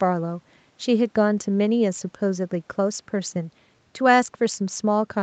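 No faults in this speech; the band stops at 8 kHz, as expected after call microphone processing and the call codec, and room noise sits about 42 dB below the speech.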